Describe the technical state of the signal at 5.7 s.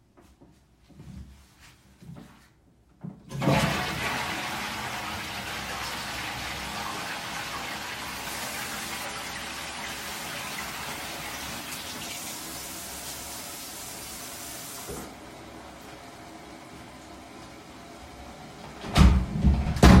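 At 5.7 s the signal is intact, with no audible fault at that moment.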